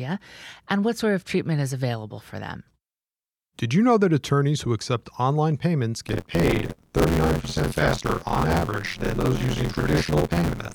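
From 6.06 s to the end, buffer tearing sets in. Writer and playback pointers have slipped, so a bit under half of each period replays speech from about 50 ms earlier. The hard joins make a robotic 86.1 Hz buzz, which fits a 512-sample buffer.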